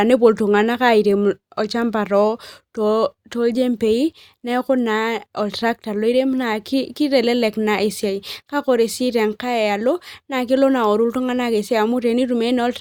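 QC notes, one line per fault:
Nothing to log on this one; no faults turned up anywhere in the speech.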